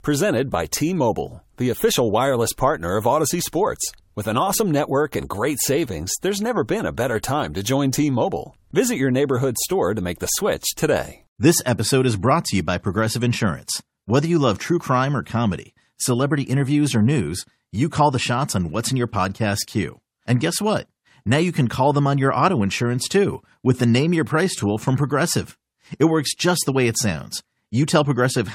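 No technical faults are audible.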